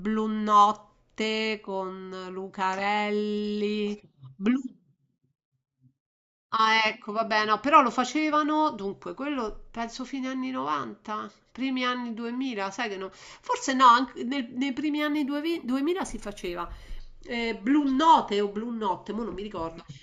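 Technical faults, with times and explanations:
14.98 to 17.00 s, imaging from linear upsampling: the audio was rate-converted by straight-line interpolation, consistent with going from 16 kHz to 48 kHz. The top end dulls, and a mirrored image in the 8 to 16 kHz band, roughly 30 dB down, adds faint metallic shimmer to sibilants.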